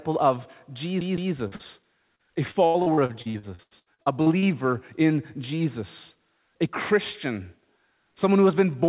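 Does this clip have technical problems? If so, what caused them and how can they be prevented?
Yes. From 1.01 to 1.33 s, a CD stuck on one turn sends the laser back to the same spot, so a 0.16 s slice of speech repeats twice with short mutes between repeats. Cleaning or replacing the disc, or ripping it with an error-correcting tool, prevents this.

Two short concealed packet losses, at 1.48 to 1.55 s and 1.56 to 1.62 s, each left about 40 ms missing. The decoder extended the preceding sound to fill each hole, producing brief smears. A larger jitter buffer and a more stable network connection prevent these.

Repeated packet loss from 2.15 to 4.45 s created 17 gaps, the longest 83 ms. Concealment filled about a third of that stretch, so the speech turns choppy. Using a wired connection, reducing competing traffic, or adding forward error correction keeps such loss bursts from forming.

Throughout the clip the call path's G.711 A-law codec leaves nothing above 4 kHz, which fits a 64 kbps narrowband link.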